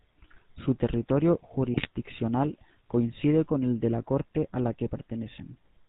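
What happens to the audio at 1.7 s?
Between 1.74 and 1.87 s, GSM bit errors corrupt a run of decoder frames. The damage points to an error rate of roughly 1.4 percent of bits. Flipped filter, pitch and gain values warp the spectrum and jolt the level, so the speech breaks into a brief squawking, gargling burst.

Underneath that burst, and around it, the GSM full-rate codec is audible throughout. Its pulse-driven vocal-tract model and its cutoff at 4 kHz give the speech a plainly buzzy, gravelly roughness, which fits the 13 kbps full-rate coder.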